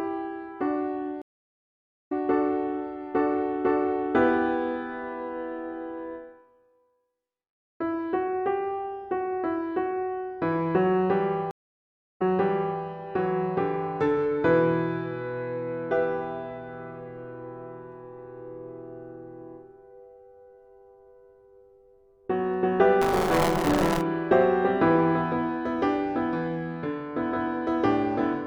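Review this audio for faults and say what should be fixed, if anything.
Two stream reconnects: at 1.22–2.12 s the sound drops out for 0.84 s and resumes roughly 0.7 s later, and at 11.51–12.80 s a 0.64 s gap resumes 0.65 s earlier, replaying audio. Both times the connection dropped and a fresh decoder picked up mid-stream.

Buffer tearing at 23.01–24.01 s: a robotic 172 Hz buzz, which fits a 256-sample buffer, where writer and reader cross and a small slice of each buffer is stale audio from one lap back.

To prevent this, give the stream client more network buffering with seamless resume, and keep the ring-buffer writer safely ahead of the hardware read pointer.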